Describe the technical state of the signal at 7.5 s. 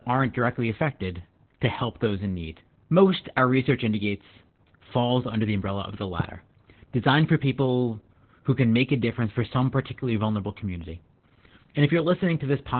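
At 7.5 s the speech carries Opus voice compression, present across the whole clip. Heavy SILK narrowband coding, consistent with a rate near 8 kbps, leaves it muffled, hoarse and slightly robotic. A spectrogram shows nothing above 4.3 kHz, with blurred, smeared harmonics below.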